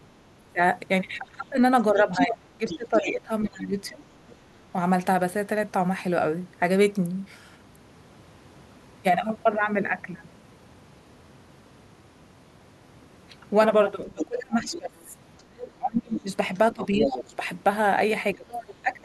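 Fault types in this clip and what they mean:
speech suppressed in double talk: The main talker keeps getting pushed down, at worst by about 25 dB, while the far end is talking too. It happens from 0.25 to 4.54 s, from 14.08 to 17.43 s, and again from 18.34 s to the end, adding up to several seconds in total. This is likely the echo canceller failing to tell the talker apart from the loudspeaker echo and clamping down on both at once.
other side's voice leaking through: A second voice from the far end is audible underneath the talker, from 1.97 to 3.1 s at about 5 dB below the main speech, then from 14.19 to 17.21 s and in a brief scrap at 18.54 to 18.64 s, both around 10 dB down. It likely comes from the talker's own loudspeaker playing the far end and reaching the mic without the echo canceller fully removing it.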